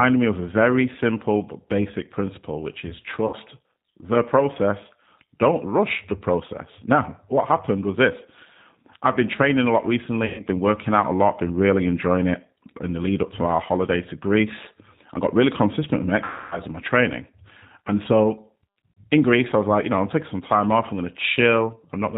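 The whole recording runs through the G.729 codec at 8 kbit/s, and the damage is plainly audible. Nothing above 4 kHz survives, so the speech sounds dull and narrow. It is rebuilt from a vocal tract filter, a pitch predictor and a few pulses per frame, not from the real waveform. The result is rough and slightly synthetic.

VoIP packet loss concealed by the speech codec follows at 3.27 to 3.36 s, after "basic principle which is". About 60 ms of audio is missing, which fits two lost packets. The decoder stretches its last pitch and filter to fill the gap, lowering the gain as it goes. At 10.26 to 10.42 s, between "been training a lot" and "been working out a", 120 ms goes the same way. The longest gap runs from 16.24 to 16.61 s, between "really consistent with my" and "and my training". There, 270 ms is filled by the fading extrapolation, and the recovery afterwards is weak. A last 60 ms gap falls at 18.92 to 19.01 s.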